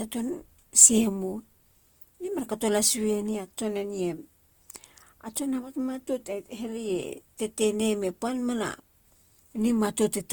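Throughout, the speech sounds rough, grainy and noisy but stays full in range, likely from Opus compression in music mode, which fits a rate near 24 kbps.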